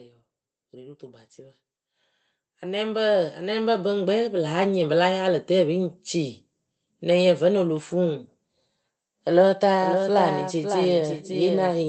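A speech recording with two stretches of automatic gain rising and a doubled audio track at the end. From 0.05 to 1.31 s the automatic gain control lifts its gain by about 3 dB, and from 2.43 to 4.77 s it lifts it again by about 10 dB, so the voice and the background noise swell together rather than the talker getting louder. On a waveform the envelope widens steadily across each span, and a spectrogram shows the noise floor brightening across all frequencies at the same rate as the speech. From 9.81 s to the end a second full-band copy of the speech runs roughly half a second behind the original and a few decibels quieter. It has no decay or room colouring and cuts in abruptly, the likely result of the same signal being captured again through a slower path. On a spectrogram every syllable's pattern reappears intact after that fixed delay, and the waveform shows matching bursts spaced half a second apart.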